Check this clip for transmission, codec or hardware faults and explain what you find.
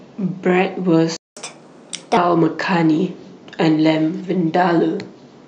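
Two related playback faults appear early in the speech, one after the other.

From 1.17 to 1.37 s there is a playback stall. The speech cuts off mid-flow for 200 ms, most likely because the player ran out of buffered data or its audio thread was briefly blocked. On a waveform this shows as an abrupt flat line where the signal stops. A spectrogram shows a clean vertical band of empty space across all frequencies, with sharp edges where the sound stops and restarts.

From 1.37 to 2.17 s the audio plays as catch-up at higher speed. The player resamples its backlog at 1.25 times normal speed to recover the lost time, so tempo and pitch rise together, by roughly four semitones. The speech sounds hurried and thinner until it drops back to normal at 2.17 s. On a spectrogram the harmonic stripes sit visibly higher and closer in time through that stretch, then step back down to their usual spacing.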